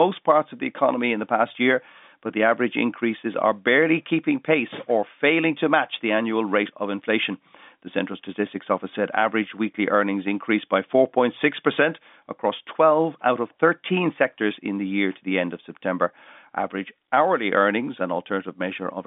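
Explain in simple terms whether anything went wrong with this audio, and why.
Nothing went wrong with this audio. It has the narrow sound of G.711 telephone coding, which passes nothing above about 3.7 kHz, and that is simply how a normal phone line is meant to sound.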